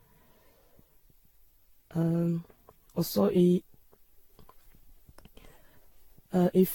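From start to finish the speech has a swirly, hollow smear, with consonant attacks blurred and nothing above 18.9 kHz. That's generation loss, likely from around fifteen lossy re-encodes, each on a shifted frame grid piling up noise and spectral holes. It sounds like Vorbis near 65 kbit/s.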